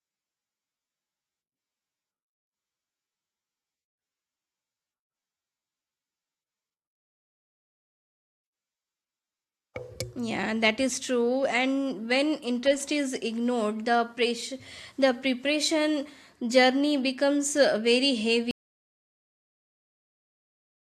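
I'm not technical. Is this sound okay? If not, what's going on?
No. At 18.51 seconds there is an audio dropout to silence that lasts right to the end of the clip, about 2.4 seconds. The speech stops abruptly and what follows is dead, total silence, without even the faint background hiss of the room. The likely cause is that the sound input was lost, perhaps a loose connection or an accidental mute, while the recording kept running and filled the gap with nothing. Whatever was said in those final seconds is gone.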